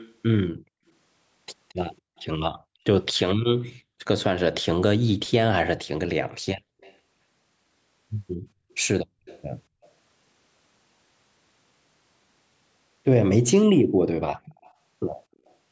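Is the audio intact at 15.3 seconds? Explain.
No. From 14.63 to 15.54 s there's a faint, delayed copy of the speech trailing about 250 ms behind, an echo leak. It's likely a loudspeaker on the other end whose echo canceller let some of its microphone pickup slip back.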